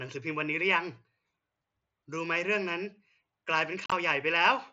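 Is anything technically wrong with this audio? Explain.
Yes. Unconcealed Bluetooth headset packet loss occurs from 3.84 to 3.92 s. Voice packets between headset and phone were dropped and replaced by silence or an idle pattern, with no concealment. About 60 ms vanishes within 75 ms, the longest gap 37.5 ms, giving chopped speech with abrupt edges.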